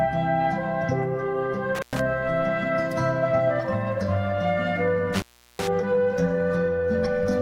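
At 1.75–2.00 s and 5.14–5.67 s, intermittent contact opens the line for about 106 ms and 369 ms: crackly edges, faint hiss between, showing as near-flat waveform gaps.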